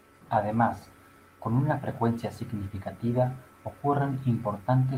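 Nothing technical stands out in this short bit of speech; no faults turn up anywhere in it.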